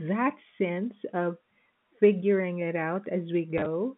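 Near the end, from 3.58 to 3.66 s, the speech catches in a brief robotic stutter. This is packet loss with the last packet repeated. About 40 ms of audio went missing, scattered across that 80 ms stretch in short gaps, none longer than 20 ms, across four lost 10 ms packets. Each gap was filled by replaying the previous chunk. Throughout, the telephone-band sound of G.711 coding is audible.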